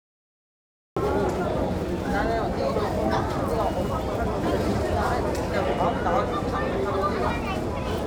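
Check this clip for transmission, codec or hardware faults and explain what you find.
There is one fault here, a cut-off start. Capture began late: the clip holds digital silence until 0.97 s, then the sound enters already in progress, with no attack or fade-in. The missed opening leaves an abrupt jump from nothing to full level at that point.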